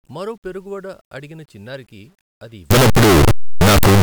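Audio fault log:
2.71–4.03 s, signed and unsigned mixed up: after "వడ అడిగిన చిన్నారికి అది" the speech turns to very loud, harsh distortion, with soft sounds as loud as strong ones. The 8-bit samples were likely read with the wrong sign, flipping the top bit so each zero crossing jumps full range.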